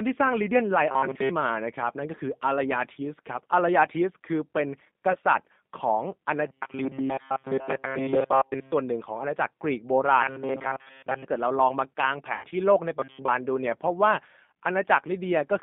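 The speech runs through a G.729 codec at 8 kbit/s. It rebuilds the voice from a vocal-tract filter, pitch predictor and a few pulses per frame, over a line band of about 150 Hz to 3.6 kHz. The result is a plainly audible rough, slightly synthetic thinness throughout. Robotic sound from repeated short buffers appears at 0.91–1.29 s, 6.46–8.72 s and 13.00–13.30 s. The likely cause is audio arriving too seldom, so the playback loops the last few milliseconds while most of the real signal is skipped. That imposes a steady 134 Hz metallic buzz, which fits a repeated slice of roughly 7.5 ms, and the buzz only loosely tracks the speech. VoIP packet loss concealed by the speech codec occurs at 5.12–5.17 s, where the short gap fits a single lost 20 ms packet. It recurs at 12.35–12.54 s, where about 100 ms goes missing across 160 ms with a longest run of 80 ms, pointing to several lost packets. In both places the decoder extrapolates from its last pitch and filter, so the sound smears into a fading buzzy tone or coloured noise and stays weak briefly after the audio resumes.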